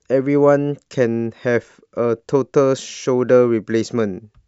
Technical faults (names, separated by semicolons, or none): none